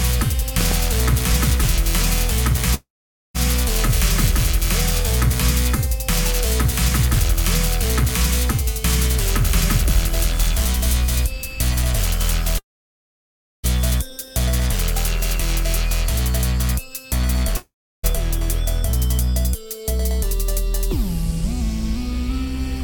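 A loud pop, heard as two sharp clicks between 0.61 and 0.74 s, peaks a few decibels above the surrounding audio, which carries on underneath. This points to a sudden voltage step or pulse entering the signal, likely from a plug, a switch, static discharge or a driver glitch, with the circuitry downstream shaping each spike into a brief thump. A long network dropout occurs three times: 2.74 to 3.36 s, 12.58 to 13.65 s, and 17.56 to 18.05 s. In each, the audio likely stops arriving, the receiver briefly stretches the last sound into a fading buzz, and then nearly silent low noise remains for about 0.48 s, 1.01 s and 0.32 s respectively. The audio resumes later, with roughly 0.6 s, 1.06 s and 0.48 s of material missing for good.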